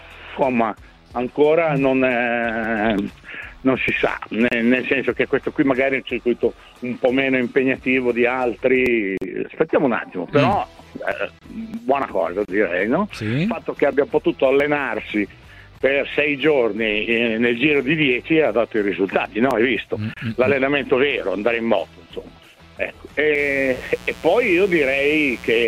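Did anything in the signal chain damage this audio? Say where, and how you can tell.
Yes: mains buzz in the analogue wiring, from 23.35 s to the end, a raspy 60 Hz buzz well below the signal. Its harmonic-rich rasp from switching spikes rules out smooth hum.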